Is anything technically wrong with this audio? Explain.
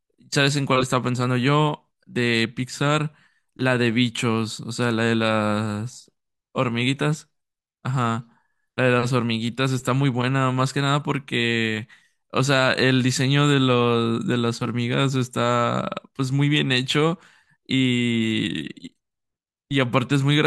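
No, nothing is technically wrong with this audio.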